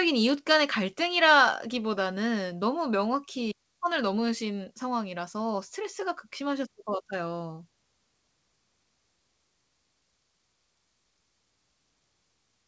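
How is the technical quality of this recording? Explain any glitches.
No glitches to point out here: the speech comes through a call codec with nothing above 8 kHz, which fits wideband G.722, and there's no dropout, stutter or other fault anywhere in it.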